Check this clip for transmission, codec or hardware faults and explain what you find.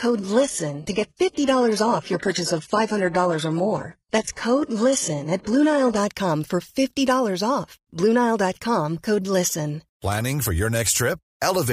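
One fault is present: an adaptive stream starting at a low bitrate. From 0.0 to 6.0 s the player streams a cheap rendition while measuring the connection. The speech sounds thin and smeared, and nothing is heard above 11.5 kHz. This fits a very low-bitrate HE-AAC stream. At 6.0 s the quality jumps without a gap, which points to a switch to a much higher-bitrate AAC rendition.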